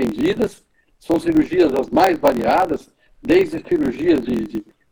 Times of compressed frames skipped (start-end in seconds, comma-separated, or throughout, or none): none